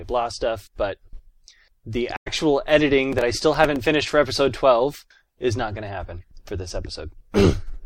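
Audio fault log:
2.16–2.28 s, AAC frame loss with muting: a run of lost frames, which fits about five AAC frames, left around 107 ms of missing audio. The decoder zeroed that stretch, and the overlapping windows fade the sound down and back up, so you get a soft-edged hole.
3.13–3.76 s, processor overload crackle: the processor fell behind and missed a handful of buffer deadlines, around seven, which fits buffers of roughly 5 ms. Each miss replayed a scrap of old audio with hard edges, and together they make a gritty crackle riding on the sound until the load eases.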